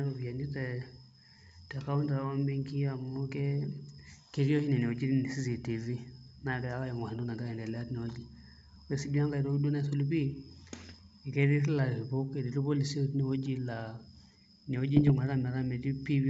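Bit errors on an ADPCM link hit this speech recording at 10.80–10.99 s and again at 14.97–15.12 s. A small fraction of flipped bits throws the decoder's step size and predictor off, so each hit rings on as pops and rough bursts with brief level jumps. The G.722 wideband telephone coding carrying it adds little audible damage of its own, which fits its full 64 kbit/s mode.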